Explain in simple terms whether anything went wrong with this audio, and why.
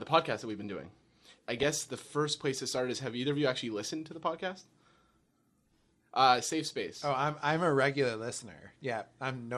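The whole clip sounds dull and gurgly, with plainly audible damage. This is likely MP2 compression, where too few bits leave upper frequencies switched off and the rest rough.

Between 1.58 and 1.63 s, after "we've been doing I" and before "the first place to", there is DAB burbling. Reception errors slipped into the broadcast data and caused short blips of noise.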